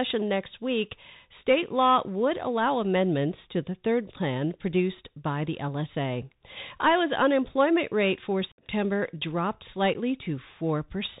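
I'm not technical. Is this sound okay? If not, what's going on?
No. The whole recording has passed through the Bluetooth CVSD headset codec, the basic narrowband format many wireless headsets use for calls. It discards everything above 4 kHz, so the speech sounds muffled and phone-like, with no crisp top end. CVSD records the sound as a stream of tiny up-or-down steps, so a grainy hiss runs under the voice throughout, s sounds come out scratchy, and loud bright moments distort because the steps can't keep up.

There are also two gaps from unconcealed Bluetooth headset packet loss, where small chunks of audio sent from headset to phone never arrived and nothing was done to cover the holes. The longer one runs from 8.52 to 8.64 s, just after "unemployment rate for". It cuts out abruptly and sounds like a chopped, missing bit of speech, which points to roughly fifteen lost packets. A second, very brief one at 9.94 s is a tiny hole in the speech.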